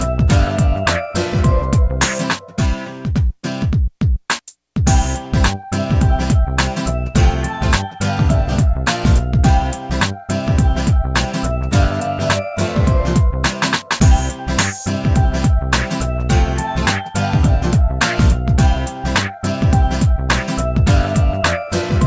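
No technical faults can be heard: the audio has come through a wideband call path whose coding leaves nothing above 8 kHz, which fits G.722 at 64 kbps, and it shows no dropouts, glitches or level problems.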